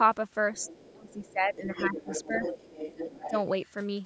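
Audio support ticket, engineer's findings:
Second voice faintly audible under the talker at 0.54–0.93 s and 1.1–1.32 s, then much stronger, about 10 dB down, from 1.63 to 3.4 s. Other side's voice leaking through, likely residual loudspeaker echo the echo canceller failed to remove.

Talker's speech dips or drops out while the far voice is present: slight dips at 0.59–0.76 s and 2.27–2.41 s, deep losses of roughly 20 dB or more at 0.93–2.11 s and 3.08–3.34 s. Speech suppressed in double talk, likely the canceller attenuating both voices together.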